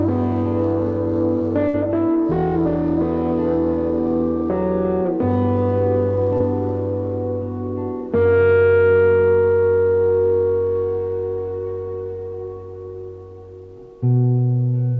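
The audio has passed through a WebRTC call path, and nothing reaches above 8 kHz, which fits a G.722 wideband codec. From 1.68 to 1.76 s there is a burst of packet loss: roughly 60 ms of audio never arrived in time, and the receiver covered the hole for about 57 ms by extending the last sound and fading it down, so a held buzz or decaying hiss stands in for the missing material before playback jumps ahead. At 6.38 to 6.42 s a short concealed packet loss follows, with about 20 ms missing and about 22 ms of synthesized fill. The decoder continued the preceding sound and cross-faded back into the real signal, leaving a brief smear or wobble where that fragment should have been.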